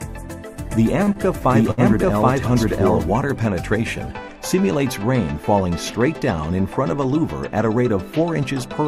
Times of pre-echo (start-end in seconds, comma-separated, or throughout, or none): none